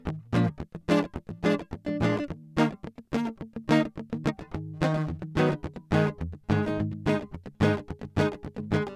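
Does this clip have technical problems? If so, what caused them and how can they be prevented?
No, this music clip has no technical problems. With nothing wrong, there is no cause to trace and nothing that needs preventing.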